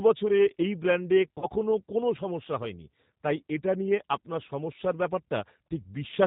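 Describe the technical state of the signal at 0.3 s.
G.729 codec damage is present at 0.3 s, as it is throughout the speech. The coder models each 10 ms frame with a vocal tract filter and a pitch predictor, then encodes the excitation as a few sparse pulses per half-frame. That approximation gives the speech a plainly audible rough, buzzy, synthetic edge, consistent with an 8 kbit/s G.729A stream, and nothing above 4 kHz survives, so the sound is dull and narrowband.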